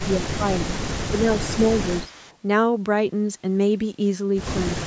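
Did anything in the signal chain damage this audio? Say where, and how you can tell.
Yes. The speech dips sharply in five places: 0.0 to 0.07 s, 0.37 to 0.68 s, 1.09 to 1.26 s, 1.54 to 1.64 s, and from 4.76 s to the end. Level falls by roughly 10 to 15 dB in short chunks. This is likely speech suppressed in double talk in the call processing stage. When both ends spoke at once, the echo canceller couldn't tell the local talker from loudspeaker echo and attenuated everything.

From 2.04 to 2.37 s, a faint delayed copy of the speech trails behind it, about 25 dB below the main signal and lagging by about 0.2 s. That is likely an echo leak, also in call processing. The far end played the call on a loudspeaker, its microphone picked that up, and its echo canceller didn't remove all of it. The residue was sent back to this side, roughly 197 ms late.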